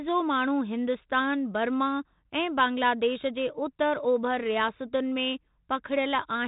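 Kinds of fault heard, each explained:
No faults can be heard anywhere in this recording.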